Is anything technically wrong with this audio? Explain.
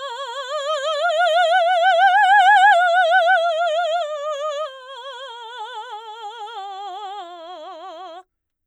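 No, nothing technically wrong can be heard in this music. It runs without any audible fault at any point.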